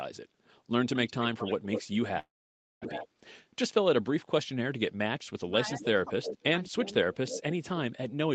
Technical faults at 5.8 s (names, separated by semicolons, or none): speech suppressed in double talk; echo leak